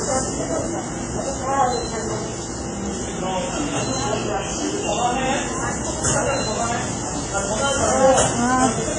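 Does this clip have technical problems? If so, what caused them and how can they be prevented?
Yes. All the way through, the sound has a ringing, washy quality with a hiss that swells and fades along with the signal, and there's nothing above about 10.4 kHz. That's most likely heavy WMA compression. A transform codec like this smears its quantisation noise over tens of milliseconds and throws away weak detail, and damage this heavy fits an old WMA encoder squeezed to something like 24 kbps. To avoid it, keep a lossless master and export at a much higher bitrate or with a modern codec.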